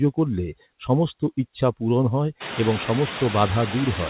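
Noise suppressor artifacts run through the whole speech clip. Background noise is pulled down by about 10 dB between words and comes back up underneath them, especially after the room noise rises at around 2.5 s.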